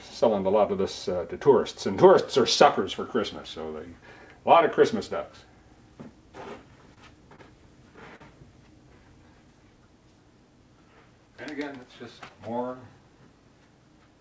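The audio comes through a call path whose G.722 coding leaves nothing above 8 kHz. At 6.94 s, 7.36 s and 8.16 to 8.21 s there is a short stall from a late packet. Each time a packet was due but had not arrived, and the jitter buffer ran dry. The receiver held the last sound for 26 ms, 27 ms and 44 ms, then resumed where it left off. Nothing is lost. Each sound just hangs briefly, with a faint buzz or dip.

From 11.35 to 12.30 s the jitter buffer speeds up. Audio had piled up beyond the buffer's target, so the receiver cut many tiny pitch-period slices to shed the extra delay. About 50 ms goes in under a second. Playback runs at 104% speed with the pitch unchanged.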